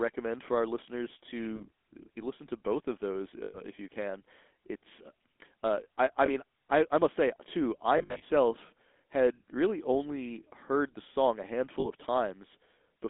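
GSM full-rate codec throughout: the speech carries a buzzy, gravelly roughness from the pulse-driven vocal-tract model, and the band runs only 250 Hz to 3.5 kHz, consistent with 13 kbps full-rate coding.

Lost GSM frames at 1.56 s (after "for our listeners"), 3.44–3.61 s, 6.26 s (after "uh I I"), 7.98–8.23 s (after "must say too I") and 11.8 s: the last good frame's settings are repeated, giving a brief rough, metallic ring.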